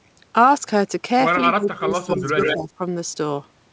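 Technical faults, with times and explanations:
1.46–2.36 s and 2.54–2.81 s, speech suppressed in double talk: the voice dips and breaks up while the far side is also talking, losing around 25 dB at worst in the first stretch and about 10 dB in the second. This is likely an echo canceller mistaking the talker for loudspeaker echo and turning both down.
2.1–2.56 s, echo leak: a delayed copy of the voice trails the original by 132 ms, only about 5 dB quieter. This likely comes from a loudspeaker-side echo canceller failing to remove what its microphone picked up and sending that residue back.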